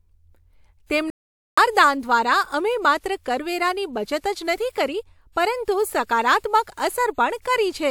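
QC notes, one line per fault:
1.10–1.58 s, playback stall: the speech cuts to silence mid-flow for about 0.47 s, then resumes. This likely comes from the player running short of data or having its output thread blocked, so nothing reached the output until it recovered.
4.19, 4.72, 6.04, 6.39, 6.63 and 7.41 s, pre-echo: a hiss of 36 to 52 ms creeps in just ahead of sharp speech onsets, which then sound softened and smeared. The codec spread quantisation noise sized for each loud attack across its whole block, filling the quiet lead-in.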